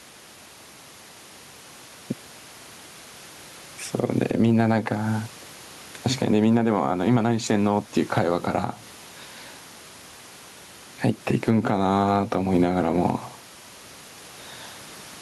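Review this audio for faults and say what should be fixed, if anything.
Gain pumping runs through the whole clip. The room noise, about 35 dB below the speech, is part of the recording. The swing is around 10 dB. Likely cause: gain set far too high, clamped by a fast limiter. To prevent it, lower the microphone gain and set the limiter to catch only rare peaks.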